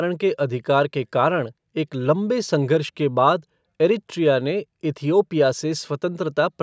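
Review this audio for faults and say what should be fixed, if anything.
Nothing needs fixing: the speech shows no technical faults, and the bandwidth ending at 8 kHz and the thinned lowest bass simply reflect the call's normal microphone processing.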